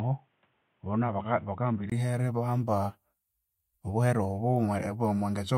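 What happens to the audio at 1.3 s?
At 1.3 s the speech is dull and boxy, likely because the input switched to a poorer device. From 0.0 to 1.92 s nothing above 3.8 kHz passes, so a spectrogram is empty up there. A 20 ms gap then marks the switch in the waveform.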